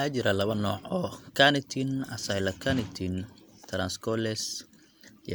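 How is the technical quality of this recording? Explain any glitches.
No glitches turn up anywhere here, so there's nothing to explain: the recording simply runs along without any technical hiccups.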